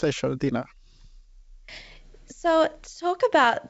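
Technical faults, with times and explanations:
The speech comes through a call path whose content stops at about 7 kHz, which fits a wideband codec such as G.722 at 64 kbps, and no technical faults are heard.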